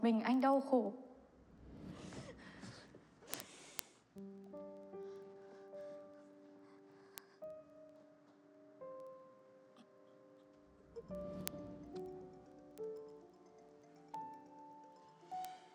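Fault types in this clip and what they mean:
word clock ticks: a receiver running on its own unlocked clock drops or repeats one sample each time the clocks slip past each other, giving a steady tick roughly every 70 ms from 0.14 s to 15.71 s, pointing to a mismatch of around 300 ppm.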